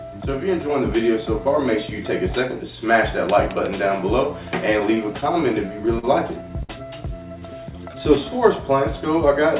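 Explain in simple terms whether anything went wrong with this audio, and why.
Between 4.8 and 6.05 s the sound catches and drags. This is repeated stalls, or stutter. Packets reached the receiver late, so its jitter buffer kept running dry. It happened seven times. Each time, the receiver held the last sound going until new audio came in. The longest hold is 42 ms. Together the holds fill 109 ms, about 9% of that stretch. Nothing is lost, but the flow stumbles.

At 6.63 s one sound hangs on too long, until 6.71 s. This is a short stall from a late packet. A single packet missed its moment. The receiver stretched the last sound for 60 ms while waiting. When the packet arrived, playback carried on from the same point. Nothing is skipped. You hear a brief held tone, perhaps with a faint buzz or dip.

From 7.39 to 8.31 s the audio runs a little slow. This is a jitter buffer slow-down. After the stalls, the receiver wanted more audio in reserve. 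So it repeated tiny slices of sound many times over. That added 75 ms and played this part at 93% speed. The pitch stays the same. Sounds are just drawn out slightly. Throughout, the call codec leaves nothing above 4 kHz, which gives the familiar phone-line sound.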